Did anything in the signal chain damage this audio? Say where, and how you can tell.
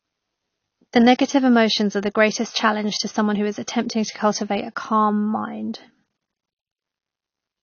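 Yes, at the codec: speech is dull and smeared throughout with nothing above 6.6 kHz, likely AAC compression, fitting a bitrate near 24 kbps.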